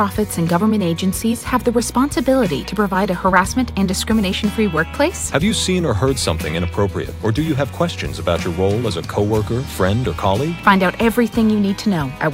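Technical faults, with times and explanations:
Nothing technical goes wrong anywhere in this one, so there's nothing to flag.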